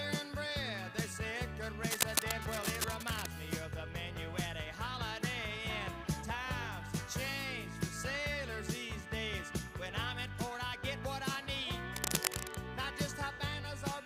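From 1.90 to 3.32 s, cable scratch noise sits over the sound. It is a dense, uneven crackle, about as loud as the audio itself. It returns more briefly from 11.96 to 12.56 s. Both bursts scratch and rustle over the sound. The likely cause is a worn cable, connector or control being moved. Its contact resistance jumps about rapidly, and each jump adds a burst of noise to the signal.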